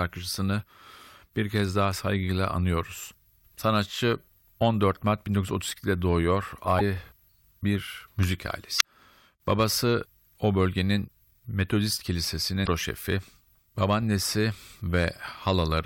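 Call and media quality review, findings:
Damaged data in a compressed stream at 8.77–8.82 s, just after "bir müzik", and again at 12.63–12.69 s. Short glitches of about 50 ms each. Corrupted bytes in the encoded speech. Decoder misreads frames, loses sync, resyncs at next header.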